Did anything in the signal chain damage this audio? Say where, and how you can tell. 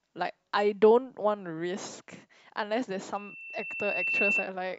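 Yes: an acoustic loop between a loudspeaker and the microphone feeding it caused a loudspeaker feedback squeal in this speech clip. From 3.15 s to 4.53 s a single 2.7 kHz tone appears and swells over roughly a second until it sits a few decibels above the speech. Only one pure pitch grows on its own, the signature of a loop whose gain has passed unity at that frequency and keeps recirculating until the loop is broken.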